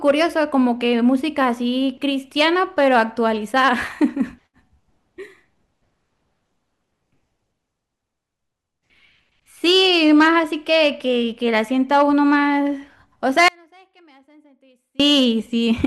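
From 13.48 to 15.00 s, an audio dropout to a faint residue, likely a lost input: speech abruptly sinks about 35 dB, leaving a near-flat waveform and a nearly empty spectrogram.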